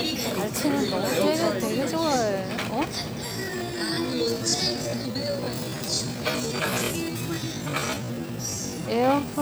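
A time-stretched section runs from 3.24 s to the end at 9.41 s, where the pace abruptly drops to about 0.56 times normal while pitch stays unchanged. The audio drags, likely from software lengthening it by repeating short slices.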